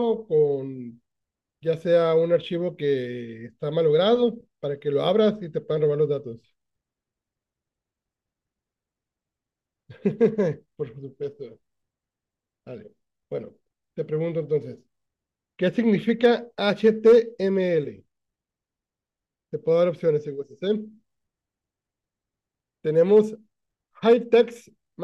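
At 10.24 s and again at 16.24 s there are brief ticks of hard clipping: the speech peaks push past what the signal path can carry, so their tops get sliced flat. It's worse from 16.69 to 17.17 s, about 3 dB over, where you get a gritty crackle. Then come shorter bursts at 23.16 to 23.19 s and 24.10 to 24.41 s, about 1 to 2 dB over, with that same harsh edge.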